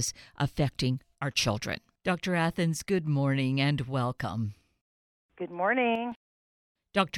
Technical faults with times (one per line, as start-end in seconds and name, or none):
1.15-1.36 one channel drops out
5.95-6.12 one channel drops out